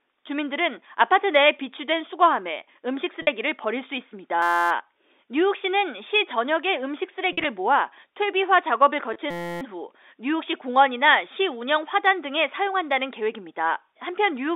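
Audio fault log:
3.22–3.27 s, 7.32–7.45 s, 9.13–9.16 s packet loss with pitch repetition: gaps of 50, 70 and 20 ms are filled by repeating the last pitch period, giving a brief held buzzy tone. On a spectrogram the harmonics freeze as flat stripes, then fade.
4.42–4.71 s, 9.31–9.61 s system hang loop: a 5.8 ms slice, which fits a 256-sample buffer, repeats 49 and 53 times, producing a steady 172 Hz buzz. The waveform shows identical repeating cycles, and the spectrogram shows evenly spaced lines at 172 Hz within the telephone band.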